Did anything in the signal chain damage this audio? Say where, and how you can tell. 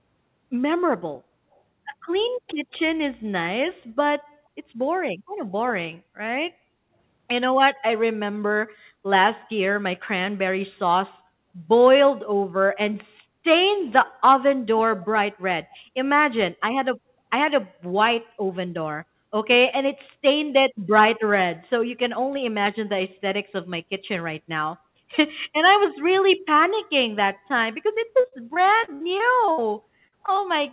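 Yes. Call processing: faint delayed copies of the sound at 1.54–1.60 s and 15.70–15.77 s, trailing by 282 ms, are likely echo leak from an incomplete echo canceller. A fixed lag distinguishes this from reverberation.

Network: repeated packet loss (robotic sound) from 28.2 to 29.6 s. Eight gaps, the longest 65 ms, were patched with continued sound, leaving about a fifth of that stretch concealed and choppy.

Network: short concealed packet loss at 30.08–30.14, 30.26–30.30 and 30.36–30.40 s. These isolated 20–40 ms holes give brief smears and wobbles, unlike the sustained robotic run before them.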